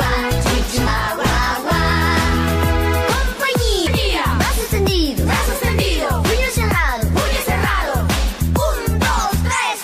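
At 0.86 to 0.88 s, and again at 3.86 to 3.88 s, a brief blip cuts through the sound. Each is damaged data in the compressed stream. The decoder misreads the corrupted frames, loses sync and hunts for the next valid frame header.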